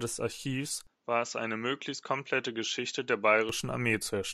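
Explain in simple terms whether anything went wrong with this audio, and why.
From 0.87 to 3.49 s the speech turns duller, losing its sharpest highs above 7.6 kHz, with a faint new hiss. Loudness holds steady and it clears again, most likely an input switched to a poorer device.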